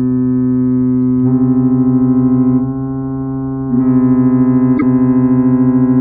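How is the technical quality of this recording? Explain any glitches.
There is one glitch, from 4.77 to 4.83 s. It is likely a broken MP3 bit reservoir. After frames were lost, the next 26.1 ms frames reached back for borrowed data and decoded bytes from the wrong frame. The sound skips forward and breaks into a brief glitch lasting about two frames.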